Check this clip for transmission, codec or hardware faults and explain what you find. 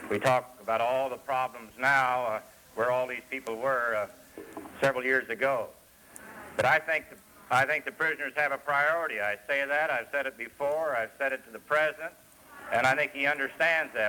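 Nothing stood out on listening to the clip.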